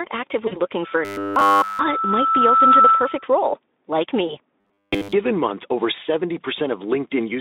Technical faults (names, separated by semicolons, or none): VoIP packet loss concealed by the speech codec; loudspeaker feedback squeal; robotic sound from repeated short buffers